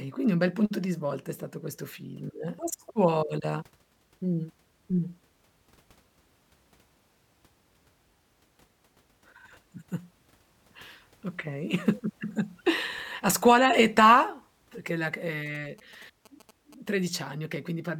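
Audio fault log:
15.46–16.89 s, GSM signalling bursts: a galloping run of short 217 Hz buzzes well under the speech, from a nearby phone's radio bursts rectified in the audio circuit.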